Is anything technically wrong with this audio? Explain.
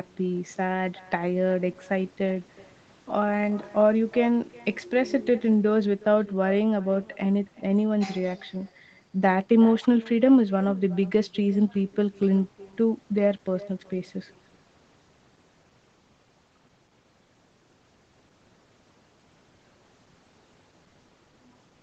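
Yes. Echo with no canceller, throughout: the far end's loudspeaker feeds its microphone unchecked, so every phrase returns roughly 0.4 s later as a thin copy about 23 dB quieter.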